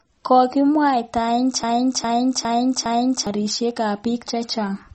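From the start the speech carries plainly audible MP3 compression: nothing remains above 8.4 kHz, and the s sounds turn watery and swirly, with smeared attacks. The damage sits inside the sound itself, unlike added hiss, and points to a low bitrate around 32 kbps, likely starved of bits.

From 1.63 s to 3.27 s a broken-record loop takes over, a 0.41 s fragment repeating four times back to back. It is likely a stalled stream resending its last buffer. The repeats are exact copies, not a stutter of growing gaps, and the speech from that stretch is lost.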